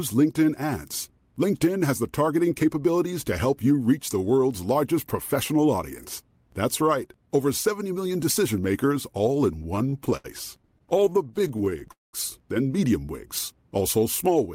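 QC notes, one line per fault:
9.59–10.26 s and 10.62–11.87 s, repeated stalls (stutter): Right after "decision makers all in", the audio catches nine times, the longest stall about 73 ms and a quarter of that span held, then twenty shorter hitches under 20 ms each. Packets arrived late, the playback buffer kept running dry, and each stall was bridged by extending the last sound, so nothing is lost but the flow drags and judders.
11.91–12.15 s, call audio freeze: The sound hangs for about 0.22 s, trailing off into roughly 0.17 s of silence before resuming exactly where it stopped, with nothing skipped. This is likely a network hold-up that emptied the buffer: the receiver stretched and faded the last sound while waiting, which inserts a gap and pushes the rest of the audio later.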